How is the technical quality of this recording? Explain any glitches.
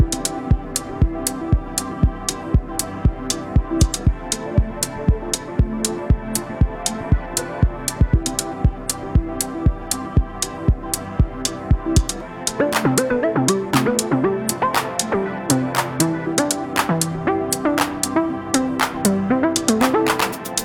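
No technical glitches or faults can be heard anywhere in the recording, and the signal holds steady throughout.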